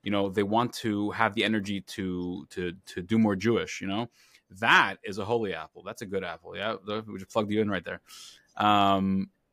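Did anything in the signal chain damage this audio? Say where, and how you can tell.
No, nothing in the signal chain stood out as damaging this recording when listening to it.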